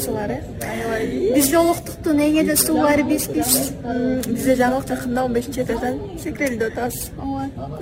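Periodic clock jitter runs through the whole clip. Interference is wobbling the converter's sampling clock at around 4 kHz, so every component of the sound picks up sideband copies spaced that far above and below it, strongest around high-frequency content. It comes across as a rough, metallic edge that disappears in quiet gaps. On a spectrogram, each band carries ghost traces offset by about 4 kHz. The waveform looks essentially unchanged.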